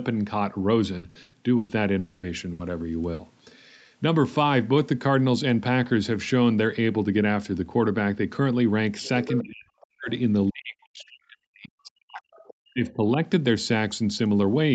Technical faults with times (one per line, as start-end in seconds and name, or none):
0.97-1.72 repeated packet loss (robotic sound)
1.99-2.26 long network dropout
2.53-2.62 burst of packet loss
3.13-3.22 burst of packet loss
9.05-9.42 other side's voice leaking through
9.41-10.10 speech suppressed in double talk
10.50-12.39 speech suppressed in double talk
12.34-12.53 other side's voice leaking through
12.73-13.16 speech suppressed in double talk
12.87-12.92 other side's voice leaking through